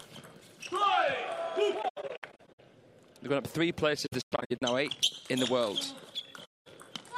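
The audio has AAC frame loss with muting at 1.82–2.60 s, 4.06–4.62 s and 6.45–6.67 s. Missing frames decode as silence. Overlapping windows fade each gap out and in, giving soft edges. The first two bursts scatter short holes, none much over a tenth of a second.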